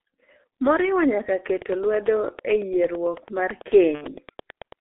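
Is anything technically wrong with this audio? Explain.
Yes, two things. The whole clip has gone through the G.723.1 codec, a low-rate telephony coder that packs speech into 30 ms frames at what sounds like about 6 kbit/s. Heavy damage here: the band is squeezed to roughly 300 Hz to 3.5 kHz, so the voice comes out muffled and hoarse with smeared consonants.

Then from about 3.95 to 4.06 s there's VoIP packet loss concealed by the speech codec. Around 60 ms of data went missing, which fits two lost 30 ms frames. The decoder filled in by stretching its last pitch and filter with falling gain, so you hear a fading buzzy, coloured patch, and the voice stays weak or distorted right after it.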